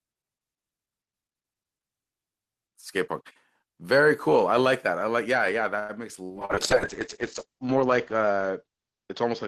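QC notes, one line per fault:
5.79 to 5.92 s, short stall from a late packet: a packet arrived late, the jitter buffer ran dry, and the receiver held the last sound for about 95 ms before resuming at the same point, so nothing is lost but the sound hangs too long with a faint buzz or dip. Everything after is shifted about 95 ms later. On a spectrogram the harmonics run flat and frozen across the gap; the waveform shows a repeating, slightly sagging cycle.
6.25 to 6.32 s and 6.45 to 6.52 s, short concealed packet loss: two bursts of about 40 ms each failed to reach the decoder, and the receiver filled each hole by extending the preceding sound, continuing its pitch where voiced or shaping noise where not, then crossfading back into real audio. Each heard as a quick smear or wobble, and a brief consonant can drop out. A spectrogram shows short blurred patches with smoothed harmonics; the waveform shows a fading, repetitive stretch.
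6.33 s to the end, call bitrate drop: the bandwidth estimate fell and the encoder was pushed from 32 kbps down to 7 kbps, sitting at that floor for about 1.1 s. At this rate Opus codes coarsely and narrows the audio band from 20 kHz to 8 kHz, so the sound turns muffled and watery. On a spectrogram everything above 8 kHz abruptly goes empty, with grainy, smeared texture below it.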